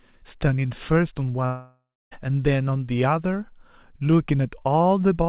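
At 1.46 s the speech breaks off, and the last sound is stretched into a buzzy tail that fades out. About 0.3 s of near-silence follows, and speech resumes at 2.13 s with about 0.66 s missing. This is likely a long network dropout concealed by the receiver. Nothing is heard above 4 kHz in the clip, which fits a G.711 mu-law call path.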